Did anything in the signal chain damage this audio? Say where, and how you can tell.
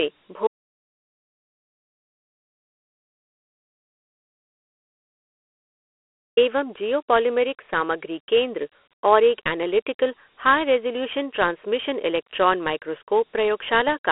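Yes. At the codec stage the whole clip carries Dialogic VOX ADPCM damage: a plainly audible gritty hiss rides on the speech, the band sits at 300 to 3400 Hz with nothing above 3.8 kHz, and 32 kbps fits 4-bit samples at 8,000 per second.

The second fault is an audio dropout to silence from 0.47 s to 6.37 s. The signal drops to silence for about 5.9 s, with no room tone, and resumes abruptly on "एवं जिओपोलिमेरिक सामग्री केन्द्र". The likely cause is lost input while the recorder kept writing silence.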